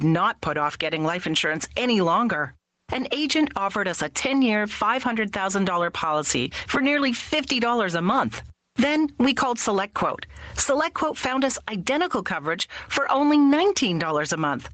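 Gain pumping runs throughout: the gain swings by around 15 dB, likely from excess gain clamped by a fast limiter on loud sounds.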